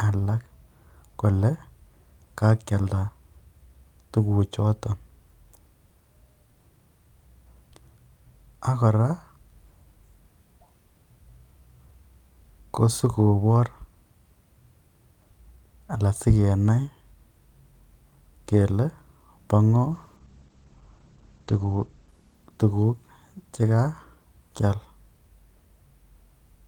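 From 19.92 s to 24.42 s the speech turns rough and watery, and the top end goes muffled, as if a blanket were thrown over it, before the clarity returns. This is a call bitrate drop: the connection's bandwidth estimate fell, so the encoder went from 48 kbps down to 11 kbps. At the floor, held for about 1.9 s, the coding grows coarse and the audio band shrinks from 20 kHz to 8 kHz, stripping the high frequencies.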